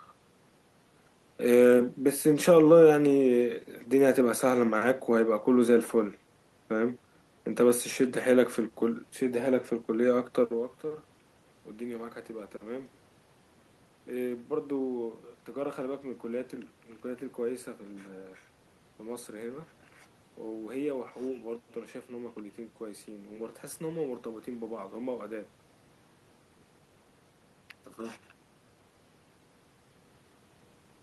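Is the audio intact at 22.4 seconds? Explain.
Yes, the audio is intact at 22.4 seconds, with only the background noise of the room present alongside the speech.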